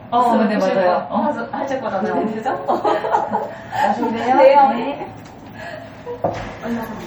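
From start to finish the sounds carry a watery, swirling texture, with smeared attacks. The likely cause is MP3 compression starved of bits, consistent with about 48 kbps: the encoder lets weak spectral lines flicker between frames.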